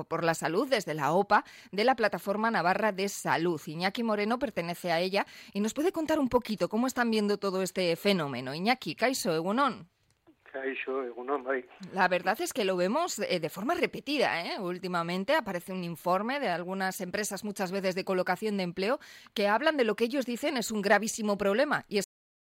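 A cut-off end arrives at 22.04 s, where the final stretch of audio was never written out or played back. The sound halts mid-event and falls straight into digital silence for the last half second, with no natural decay.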